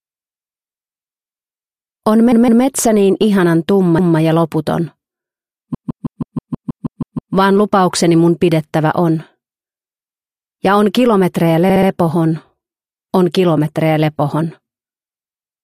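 Repeated frames: a short run of compressed frames was decoded more than once, so the same slice of audio replays in a stutter. A 160 ms block plays two extra times at 2.32–2.64 s, a 192 ms block once more at 3.98–4.18 s, a 160 ms block ten extra times at 5.74–7.34 s, and a 64 ms block three extra times at 11.70–11.89 s, together adding about 2.3 s.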